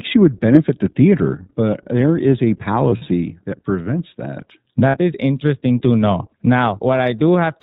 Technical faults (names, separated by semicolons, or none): iLBC codec; lost iLBC frames